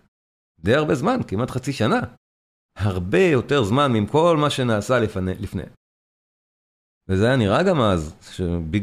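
No technical faults can be heard anywhere in the speech. In the pauses the output fades to silence and the background drops away, then returns in time for the next sound without losing any speech.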